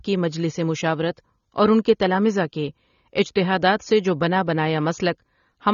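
From start to end, the speech has nothing above 6.9 kHz and a plainly audible smeared, warbling fizz on sibilants. That swirl, absent from a clean low-pass filter, marks AAC compression as the likely cause, which fits AAC-LC at about 24 kbps.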